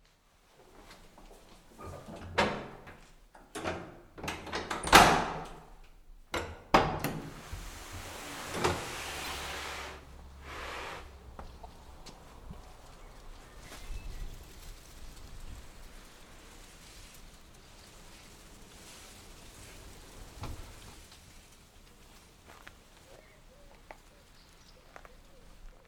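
Corrupt frame decoded at 9.24 to 9.28 s, 11.63 to 11.66 s and 18.72 s. Flipped bits in compressed frames were decoded anyway, so misread gains and codes put energy at wrong frequencies. Each gives a brief chirp, squeak, blip or noise burst, each quieter than the last.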